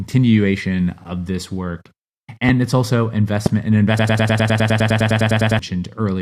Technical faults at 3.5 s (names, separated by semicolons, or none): loud pop